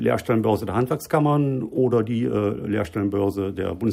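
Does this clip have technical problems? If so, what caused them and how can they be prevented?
Yes. Clock slip clicks run from 0.13 s to the end of the clip: faint, regular ticks about every tenth of a second. Each tick is a single sample being dropped or repeated. The likely cause is two devices running on separate, unsynchronised clocks that differ by roughly 200 parts per million. That drift adds up to a whole sample at a steady rate, so a slip, and its tick, comes at a fixed interval. To prevent it, lock every device to one shared word clock, or use asynchronous sample-rate conversion between them.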